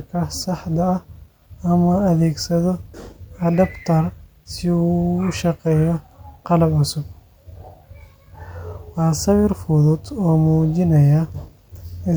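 No faults are audible anywhere in the speech recording.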